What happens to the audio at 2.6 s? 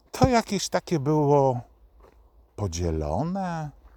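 Nothing goes wrong at 2.6 s; the speech runs through that moment without any audible dropout, glitch or distortion.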